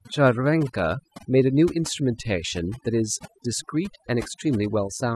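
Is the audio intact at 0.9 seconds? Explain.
No, overdone noise removal runs through the whole clip, so 0.9 s is hit too: bands near the noise floor get gated out, taking quiet parts of the voice with them and leaving twinkly near-silence.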